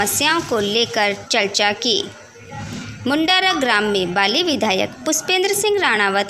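Nothing in the recording stood out as a technical problem on listening.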